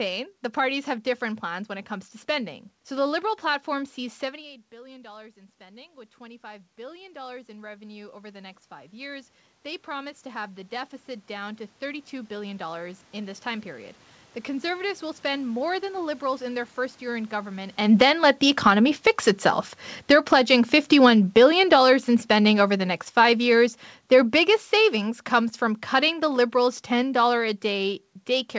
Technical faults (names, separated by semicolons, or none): automatic gain rising; automatic gain falling